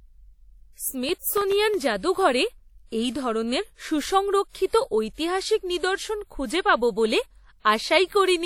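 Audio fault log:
Throughout: WMA compression, likely the cause of the plainly audible washy, ringing quality with hiss that swells and fades with the speech. The damage fits a bitrate around 48 kbps. A spectrogram shows a hard ceiling at 18.7 kHz and smeared, patchy energy around onsets.
1.09 to 1.74 s: processor overload crackle, just before "জাদুঘরে এই ধরনের". Several buffers of under a millisecond each missed their deadline and were filled with old audio, leaving hard-edged splices heard as gritty crackle. The waveform shows small discontinuities, and the spectrogram shows thin vertical broadband streaks.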